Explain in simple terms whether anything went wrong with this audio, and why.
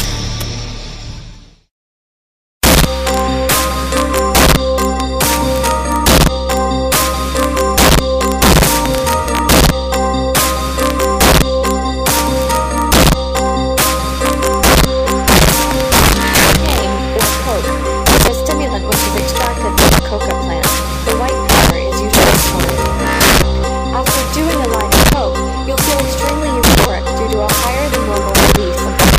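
Something did go wrong: there's integer overflow all the way through. The audio was pushed louder than the number format could hold, so on loud moments the peaks wrap around to the opposite extreme instead of flattening. A few percent of the sound does this, giving harsh cracks far sharper than ordinary clipping.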